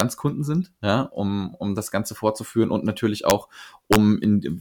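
Integer overflow cracks this speech three times: right at 0.00 s before "sind ja um um", at 3.30 s after "fortzuführen und natürlich", and from 3.93 to 3.96 s. Peaks pushed about 1 to 2 dB past the limit wrapped to the opposite sign instead of clipping, giving those harsh snaps.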